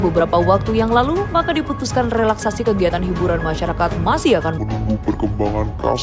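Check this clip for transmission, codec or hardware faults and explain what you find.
One fault is present. From 4.58 s to the end, a wrong sample rate slows the sound to two-thirds speed and lowers its pitch by about 7 semitones, which fits 24 kHz material played at 16 kHz without conversion. Because pitch and tempo fall together, it cannot be a pitch shift or time-stretch alone.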